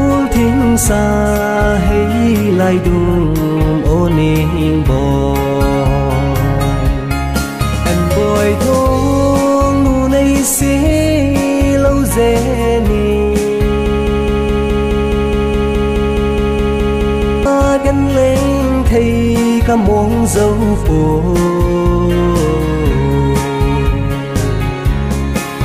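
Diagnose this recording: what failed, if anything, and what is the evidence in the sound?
Broken-record loop: from 13.86 to 17.46 s a 210 ms fragment repeats 17 times, likely a stalled player, encoder or stream resending its last fragment.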